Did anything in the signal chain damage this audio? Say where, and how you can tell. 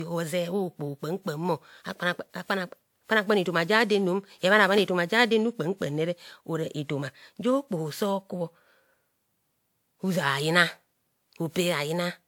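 Yes: codec stage, throughout the speech. It sounds swirly, hollow and smeared, with blurred attacks, yet content reaches 20.1 kHz. A single low-bitrate encode would cut the top, so this likely points to generation loss: around seven WMA passes near 128 kbit/s, each stacking fresh quantisation noise.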